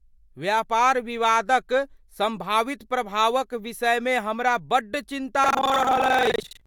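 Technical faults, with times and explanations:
5.42 to 6.67 s, buffer tearing: the speech suddenly takes on a robotic rattle that buzzes along at about 23.4 Hz until the clip ends, which fits a 2048-sample buffer. The writing side and the playback side of the ring buffer have drifted so they cross mid-period. Roughly 40% of each chunk is stale audio from around a tenth of a second earlier, spliced in with hard edges on both sides, and that repeating seam is the buzz you hear.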